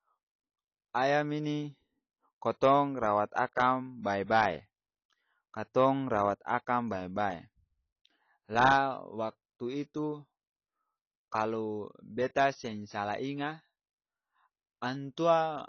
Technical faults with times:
0.00-15.68 AAC compression

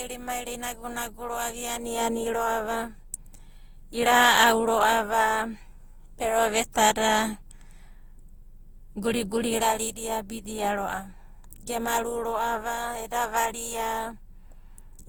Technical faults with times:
0.00-15.09 generation loss

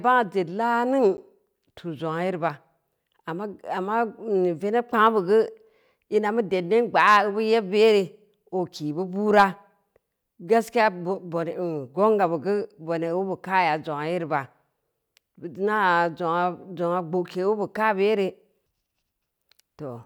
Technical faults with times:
1.17 block of digital silence

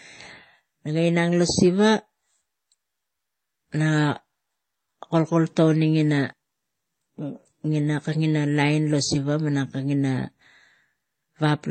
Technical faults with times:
0.00-11.70 transcoding between lossy codecs

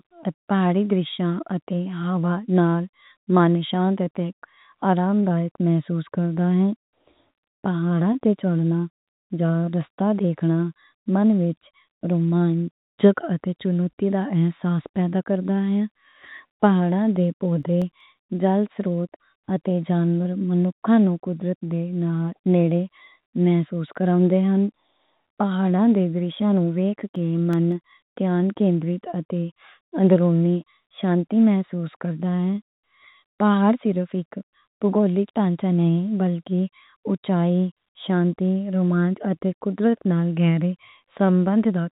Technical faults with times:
0.00-41.93 clock drift between sender and receiver
0.68-4.75 scattered short gaps
5.21-41.27 repeated timing corrections
17.25-18.00 CD scratch ticks
26.59-27.91 CD scratch ticks

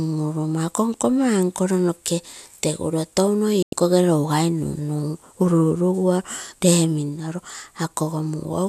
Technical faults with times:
3.62-3.73 digital broadcast dropout

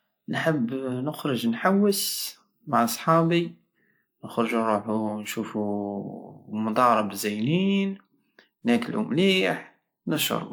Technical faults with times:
none

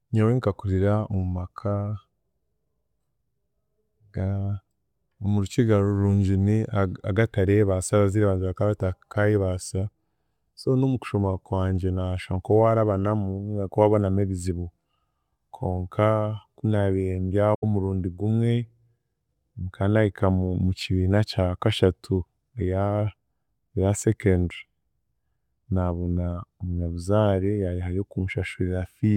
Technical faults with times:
17.54-17.63 AAC frame loss with muting

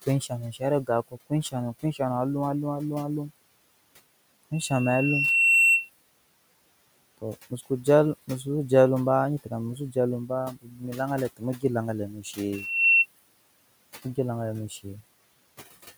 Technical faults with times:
0.04-2.00 speech cut by the noise suppressor
7.18-7.87 speech cut by the noise suppressor
9.44-9.96 speech cut by the noise suppressor
10.28-10.83 speech cut by the noise suppressor
11.37-11.64 speech cut by the noise suppressor
12.09-12.39 speech cut by the noise suppressor

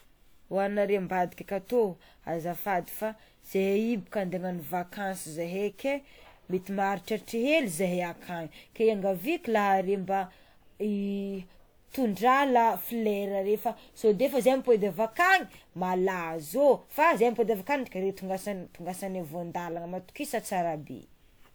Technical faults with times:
0.00-21.54 generation loss

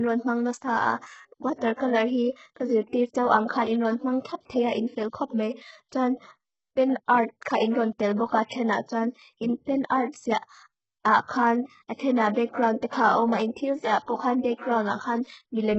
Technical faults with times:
0.00-15.78 HE-AAC compression
1.74-1.79 pre-echo
11.24-11.29 pre-echo

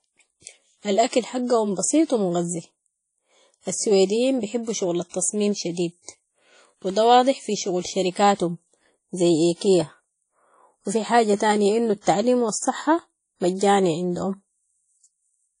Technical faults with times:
0.00-15.60 WMA compression

